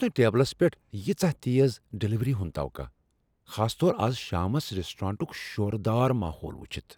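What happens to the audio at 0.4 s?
Nothing goes wrong at 0.4 s; the speech there plays through intact, with no dropout, click, distortion or other audible fault.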